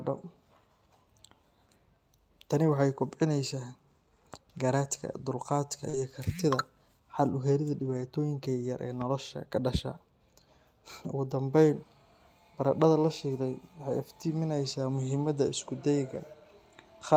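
Right after "garaadka dulqaadka", at 5.89 to 5.95 s, a brief smear or wobble replaces the speech. This is short concealed packet loss: about 40 ms never arrived in time, and the receiver filled 38 ms by extending the preceding sound before blending back.

Overlapping it at 5.93 to 5.99 s, then at 7.81 to 8.03 s and 16.13 to 16.19 s, the speech turns briefly rougher and noisier without any gap. Each is a lost packet rebuilt from error correction: the decoder played low-bitrate copies carried in the following packets, covering 40 ms, 120 ms and 40 ms. Those lengths fit two, six and two lost packets.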